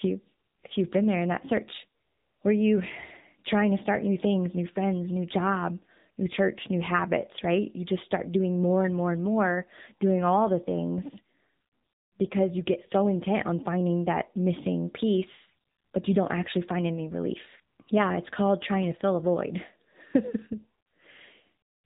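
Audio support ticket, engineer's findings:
AMR narrowband mobile codec, whole clip. Plainly audible coding damage on the speech; band-limited, nothing above 3.8 kHz. Spectrogram: hard flat ceiling at 3.8 kHz, empty above. Component: mobile leg, AMR-NB speech codec at 8 kHz sampling. Mechanism: voice rebuilt from a vocal tract filter, pitch predictor and a few pulses per 5 ms. Damage level fits a low mode near 8 kbps.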